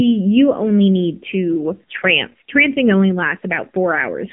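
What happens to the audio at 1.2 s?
At 1.2 s the speech carries the AMR narrowband mobile codec damage that runs through the whole clip: only about 150 Hz to 3.5 kHz survives. Unlike a simple telephone band-limit, the voice is rebuilt from a vocal-tract model, so it sounds buzzy and synthetic, consistent with a low rate near 7.4 kbps.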